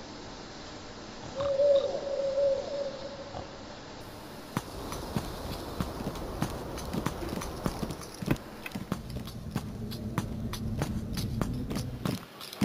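From 4.01 s to the end, the sound picks up a bright, metallic fizz that rises and falls with the level of the audio. That's imaging from sample-and-hold upsampling: each sample was simply repeated to raise the rate, with no smoothing filter, which fits a 16 kHz source pushed up to 44.1 kHz. Mirrored copies of the spectrum land above the original band, the first one filling 8 to 16 kHz at about 20 dB below the signal, and its movement runs opposite to the pitch.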